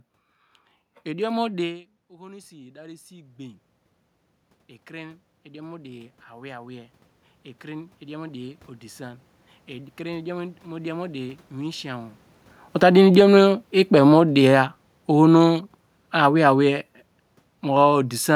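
Speech, with automatic gain rising three times and automatic gain falling once. Just after "idiom mu", around 1.5 s, the talker moves back and the voice drops by about 18 dB. From 1.64 to 3.70 s the level then climbs by about 7 dB as the gain control compensates for the quieter input. It climbs again by about 5 dB from 4.87 to 7.00 s, after a second input drop of about 18 dB, and by about 7 dB from 7.61 to 12.25 s. A talker's movement changes only the voice. Here the room noise swells along with the voice during each climb, which shows that the gain stage, not the microphone distance, is moving. Around 12.5 s the talker moves again. From 12.67 to 15.64 s the control pulls the level down by about 7 dB. The voice and the room noise sink together over those three seconds, which marks this as automatic gain falling rather than a talker drifting away.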